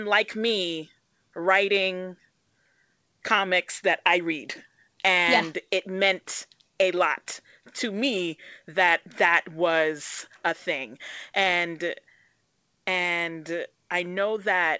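No technical faults can be heard in this speech recording. It has passed through a WebRTC call path that is working normally, and nothing reaches above 8 kHz, which fits a wideband call codec such as G.722.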